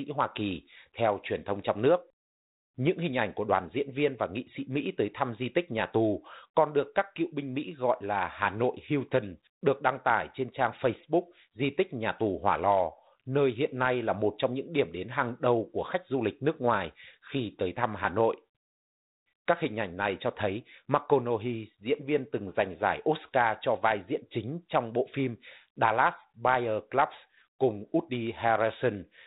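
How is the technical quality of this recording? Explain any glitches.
The speech carries two brief glitches, both bit errors on an ADPCM link, heard at 16.76 to 16.85 s and again at 20.36 to 20.44 s, each under a tenth of a second, over the light, band-limited grain of G.726-style telephone coding. A few flipped bits, well under one in a hundred, knock the decoder's step size and prediction off track, so each error becomes a pop followed by a rough, wobbling burst. Unlike a lost packet, the sound never goes silent.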